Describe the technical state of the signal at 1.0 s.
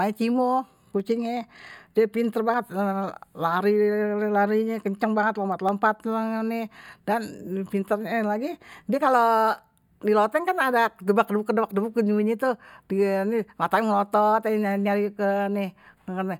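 At 1.00 s the stream likely lost a tiny run of samples, a fraction of a millisecond's worth, so the waveform jumps straight from one value to a later one with nothing in between. That discontinuity is a case of dropped samples: far too brief to remove any of the speech, it is heard instead as a single sharp click, and it shows as a thin vertical line running through the spectrum at that instant.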